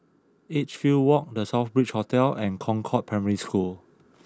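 A speech clip where voice and background swell together from 0.34 to 3.81 s, rising about 6 dB: automatic gain rising, as the control judged the input too quiet.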